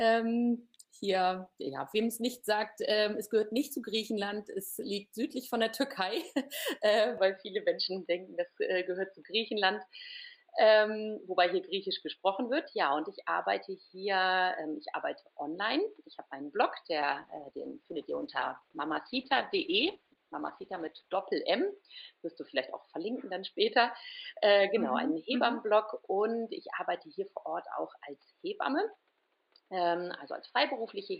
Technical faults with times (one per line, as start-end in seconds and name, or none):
0.58-5.73 call bitrate drop
7.18-31.20 input switched to a poorer device
17.03-21.23 call bitrate drop